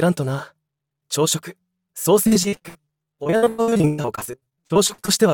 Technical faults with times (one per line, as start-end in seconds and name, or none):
2.23-5.10 repeated packet loss (robotic sound)